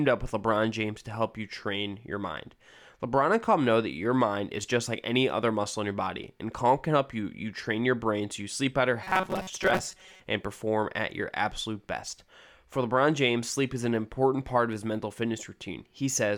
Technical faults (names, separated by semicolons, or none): robotic sound from repeated short buffers